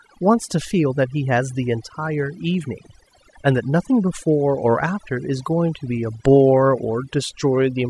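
Overdone noise removal runs throughout the speech: gating pulls bands near the noise floor to silence, leaving twinkling specks between phrases and a patchy, holed spectrogram.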